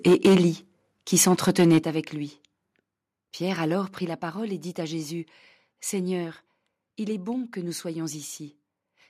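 From 0.07 to 0.4 s the speech has a harsh, crackling edge from microphone overload. Peaks run about 8 dB past the converter's limit, and about a fifth of samples are flattened. The input volume was likely set too high. At 0.09 s the level drops by about 3 dB in one step. The microphone volume was stepped down, likely by call software reacting to the clipping. Overload returns from 1.14 to 1.78 s, about 6 dB over, and a small share of samples is flattened. At 1.83 s a step down of about 8 dB follows, and speech and background fall together. Further steps come at 4.05 s, about 4 dB, and at 6.24 s, about 2 dB.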